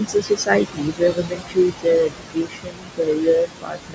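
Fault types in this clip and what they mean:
Noise suppressor artifacts: The suppressor estimates the steady noise in each frequency band, frame by frame, and cuts it by about 21 dB. With room noise only about 6 dB below the speech, the background drops between phrases and swells beneath them.
Speech cut by the noise suppressor: The suppressor misreads parts of the speech as noise and lowers them along with the background, by up to about 22 dB. Soft consonants and word endings sound swallowed or faint across 0.0–1.87 s, 2.04–3.28 s and 3.44 s to the end.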